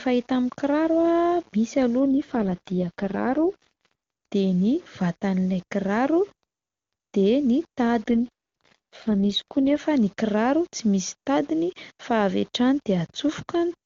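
Speech clip carrying low bit depth without dither throughout: grainy distortion that rises and falls with the voice, unlike steady hiss, sitting roughly 30 dB down, likely from rounding to about 7 bits. An AMR rate drop occurs from 2.06 to 3.95 s and again from 8.10 to 9.80 s, just before "ny kiraro". The AMR-WB codec falls from 23.85 to 6.6 kbit/s, so the voice turns raspy and synthetic. Unlike a dropout or bandwidth switch, the band stays the same and nothing goes silent.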